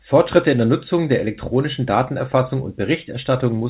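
No technical faults can be heard in the speech. It has passed through a WebRTC call path, and the band stops at 4 kHz, which fits G.711 A-law at 64 kbps.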